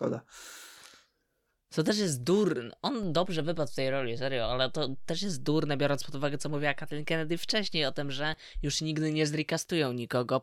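Speech, with a DC step beginning at 3.03 s, right after "też jest durne", where the waveform's zero line jumps by about -36 dBFS and stays displaced until 8.34 s, just before "już nigdy nie". Each transition is heard as a low thump, one as the offset switches in and another as it steps back out. The speech itself carries on unchanged between them. The abrupt shift in baseline points to a converter recalibrating or an offset-carrying input being switched into the path.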